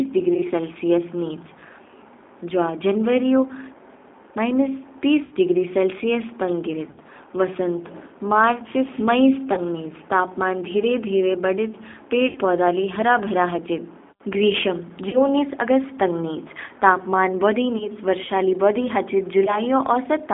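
G.729 codec damage runs through the whole of this speech clip. The voice is rebuilt at 8 kbit/s from a vocal tract filter, a pitch predictor and a few pulses per 10 ms frame, so it sounds rough and slightly synthetic. The line is confined to roughly 300 Hz to 3.6 kHz, which strips away the brightness of sibilants. VoIP packet loss concealed by the speech codec strikes eight times: at 0.34 s, just before "सेलसियस निच", 20 ms lost; at 5.25 s, just before "डिग्री सेलसियस तंग", 60 ms; at 6.91 s, 60 ms; at 9.53 s, 40 ms; at 12.29 s, 60 ms; at 15.09 s, 40 ms; at 17.78 s, between "तंग निच तापमान बौधि" and "वर्षा ली बौधि हाचिद", 20 ms; and at 19.45 s, 20 ms. Each gap fits the loss of one to three 20 ms packets. The decoder fills it by extending the last pitch and filter at falling gain, which gives a brief buzzy or noisy, fading smear. The voice stays weak or distorted for a moment afterward because each frame builds on the previous one.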